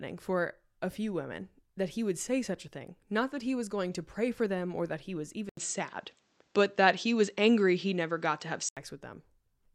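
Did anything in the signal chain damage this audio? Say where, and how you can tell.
Yes. At 5.49 s an 80 ms gap appears. Until 8.77 s the spectrogram is empty above 8.2 kHz, the level shifts by about 5 dB, and a faint new noise floor appears. The likely cause is that the driver switched the input to a poorer device.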